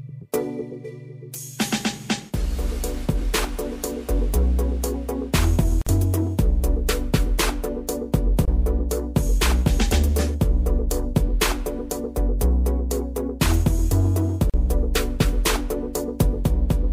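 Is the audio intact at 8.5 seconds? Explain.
No. At 8.45 s the sound drops out for about 24 ms and resumes at 8.48 s, a gap at a join of encoded pieces. The audio on either side was encoded as separate pieces and joined without trimming, so one run's padded final frame and the next run's leading encoder delay both remain as silence. The dropout's edges are smeared by the codec, and the sound then continues from where it stopped.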